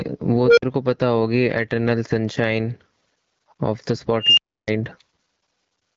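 Speech with gain pumping throughout: the gain swings by around 15 dB, ducking under each loud syllable, likely from excessive gain feeding a fast limiter, seen as a breathing envelope on the waveform. An unstable filter produces two runaway tones, visible as bright horizontal lines widening into a clipped block and then a blank gap. One, roughly 500 Hz, runs 0.44–0.62 s, building over 0.13 s, then 50 ms of silence. The other, roughly 3 kHz, runs 4.20–4.67 s, building over 0.18 s, then 0.3 s of silence. The HD Voice band edge near 7.5 kHz shows as an empty top on the spectrogram.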